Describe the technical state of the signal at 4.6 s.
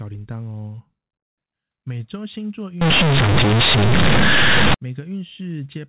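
At 4.6 s the speech falls within companded audio read as linear, from 2.81 to 4.74 s. Mu-law bytes play as plain 8-bit samples, causing loud, buzzy distortion.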